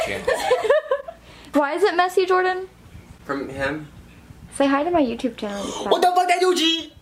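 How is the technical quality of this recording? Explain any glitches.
No glitches or technical faults are audible anywhere here.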